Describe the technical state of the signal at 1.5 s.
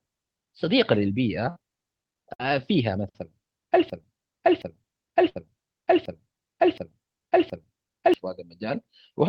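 From 1.49 to 1.58 s the speech smears into a held, fading continuation, then jumps ahead: a burst of packet loss, concealed by extending the last sound.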